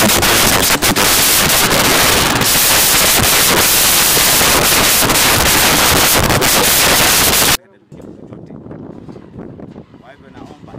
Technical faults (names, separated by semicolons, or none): samples built from the wrong bytes